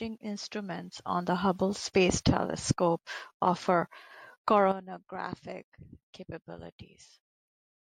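No technical faults can be heard anywhere in the recording, and the signal stays continuous and stable throughout.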